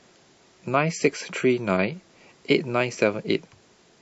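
Speech, opening on an adaptive stream starting at a low bitrate. For the first 2.0 s the treble is dull and codec artefacts are strong, which fits a 32 kbit/s MP3 rendition. At 2.0 s quality jumps without a gap, consistent with a switch to about 128 kbit/s.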